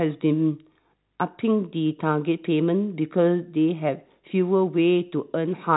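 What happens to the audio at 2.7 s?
Nothing goes wrong at 2.7 s: the speech carries on intact, with only the narrow telephone band of G.711 coding, which leaves nothing above about 3.9 kHz.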